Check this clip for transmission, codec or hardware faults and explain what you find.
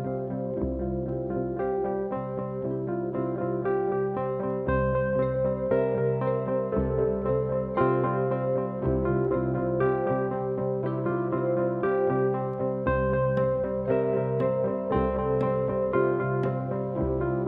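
Nothing wrong can be heard anywhere in this clip.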